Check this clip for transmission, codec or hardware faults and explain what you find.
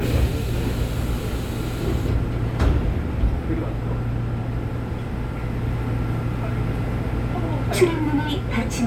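No faults detected anywhere.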